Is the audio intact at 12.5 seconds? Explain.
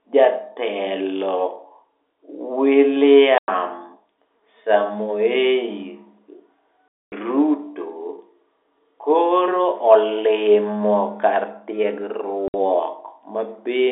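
No. Packet loss filled with silence cuts the speech from 12.48 to 12.54 s. For about 60 ms, audio that never reached the receiver was replaced by digital silence, a gap length that fits three lost 20 ms packets. The sound stops abruptly and resumes just as abruptly, leaving a dead hole. The surrounding speech keeps the narrow telephone band of the G.711 line.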